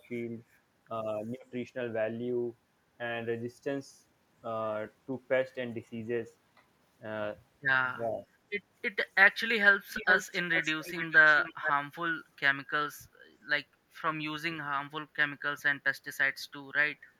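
Speech clip, with the voice dipping by around 10 dB for about a fifth of a second at 8.01 to 8.25 s: that's speech suppressed in double talk, likely the echo canceller ducking everything while both ends talked. Then echo leak shows up at 9.93, 10.53, 10.83 and 11.37 s, running to 11.72 s: a copy of the voice trailing by 0.42 s, roughly 5 to 10 dB down, likely from a speakerphone's canceller letting some of its mic pickup slip back.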